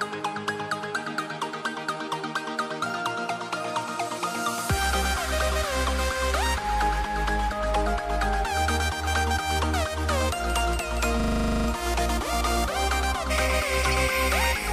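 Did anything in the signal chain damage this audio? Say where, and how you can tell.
Yes. A system hang loop at the driver or buffer stage, 11.2 to 11.68 s. A 40 ms piece repeats twelve times, giving a 25 Hz stutter while the hardware recycles its buffer.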